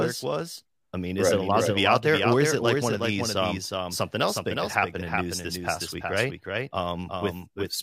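A speech recording with a doubled audio track running through the whole clip: a second, full-band copy of the sound trails the original by about 400 ms, around 5 dB quieter. Unlike an acoustic echo or reverb, the copy has no decay, no repeating tail and no room colour; it is one clean duplicate at a fixed offset. The likely cause is the signal being captured twice, once through a slower path, or two misaligned copies left in an edit.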